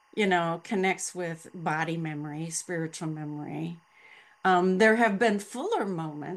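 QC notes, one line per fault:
throughout, timecode bleed: linear timecode at 23.976 frames per second leaks in as a steady chirping warble, roughly 35 dB below the speech. Its square wave flips between about 1 and 2 kHz, showing on a spectrogram as constant bands there with odd-harmonic lines above.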